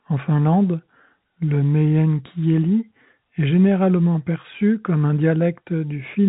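No technical faults are audible.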